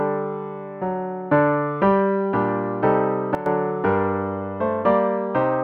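At 3.35 s the level drops by about 12 dB in a single step and stays down until 3.46 s. This sudden gain jump is likely a gain change applied without a ramp. Unlike a dropout or fade, the background noise dips by the same amount and the sound stays audible.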